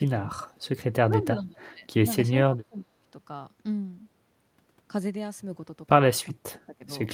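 The speech dips and partly drops out at 0.00–0.04 s, 0.24–0.60 s, 1.09–1.86 s, 2.45–3.01 s and 6.30–6.92 s, ranging from a slight sag to a cut of roughly 35 dB at the end. This is speech suppressed in double talk, likely from an echo canceller that mistook overlapping far-end sound for echo and attenuated the near-end talker along with it.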